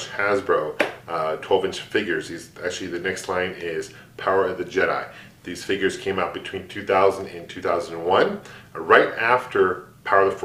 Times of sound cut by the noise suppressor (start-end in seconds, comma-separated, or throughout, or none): none